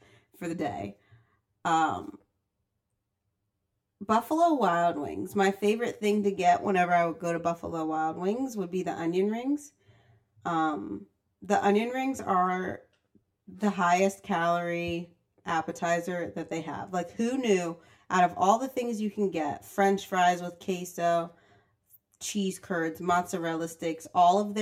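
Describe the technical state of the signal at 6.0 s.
Channel delay (comb filtering) is present at 6.0 s, as it is across the whole clip. One channel trails the other by around 10 ms, and when the two are folded to mono the shared speech cancels at regularly spaced frequencies, the first near 50 Hz and then roughly every 100 Hz above it. Those fixed notches strip energy through the voice's range, leaving it hollow and phasey at this moment.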